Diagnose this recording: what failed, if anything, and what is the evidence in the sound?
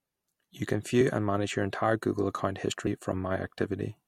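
Codec stage: compressed frames skipped at 2.86 s. The speech jumps ahead roughly 70 ms, about three 21.3 ms frames.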